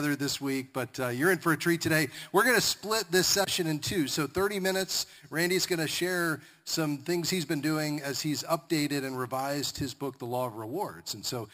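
Throughout, there's imaging from sample-and-hold upsampling: 12 kHz audio was sample-repeated up to 44.1 kHz unfiltered, leaving a metallic fizz at 6 to 12 kHz, about 11 dB down.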